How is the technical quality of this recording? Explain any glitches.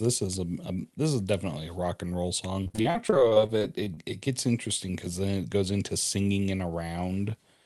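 The recording has one clear fault, a burst of repeated packet loss (robotic sound), heard over a call-style path with its top end rolled off around 12 kHz, consistent with a super-wideband call codec such as Opus.

From 2.63 to 3.99 s, just after "a rock and roll" and before "it gets interesting because", the sound turns choppy. Packets kept going missing in quick succession, and the receiver bridged each hole by stretching the preceding sound. The pattern fits about eighteen separate losses, the longest about 42 ms. Roughly a quarter of that stretch is synthesized fill, which produces the choppy texture with fragments dropped out.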